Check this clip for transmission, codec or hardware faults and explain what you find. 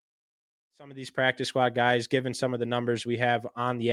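Nothing here points to a transmission, codec or hardware problem; the only change in level is a gentle fade-in on the speech that starts around half a second in and reaches full level by 1.41 s, which is just an ordinary edit.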